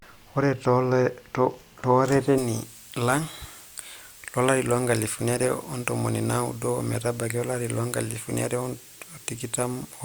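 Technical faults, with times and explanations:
2.38 to 10.04 s, pre-emphasis left on: From 2.38 s the treble jumps and stays raised to the end, about 11 dB up at 10 kHz relative to 1 kHz. The boost, which fits a J.17 curve, was never undone by its matching cut. The speech turns thin, bright and sibilant.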